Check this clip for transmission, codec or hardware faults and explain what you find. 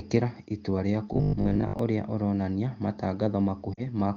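Two faults are audible in this speech clip, carried over the AMR wideband (HD Voice) codec.

Robotic sound from repeated short buffers, 1.13 to 1.79 s: this is likely a playback path starved of fresh audio, covering each gap by looping its most recent short slice while the real speech is skipped over. About half the signal here is such repeats. The looping stamps a fixed 50 Hz buzz onto the voice, which fits a 20 ms repeated chunk, so the speech turns hard and mechanical while its outline still roughly tracks the original.

Lost AMR speech frames, 3.74 to 3.82 s: corrupted frames failed the decoder's integrity check, and the decoder bridged the hole by carrying forward the last good pitch and vocal tract settings at reduced gain. The gap lasts about 40 ms, which fits two consecutive 20 ms frames. It is heard as the voice dropping to near silence, then coming back weak or rough for a moment.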